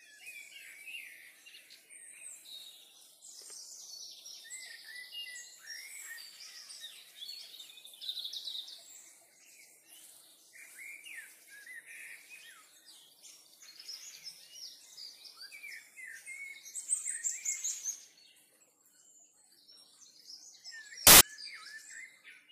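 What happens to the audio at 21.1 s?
A burst of loud, harsh broadband noise covers the sound from 21.07 to 21.21 s: samples built from the wrong bytes, misassembled so that the noisy low bits dominate.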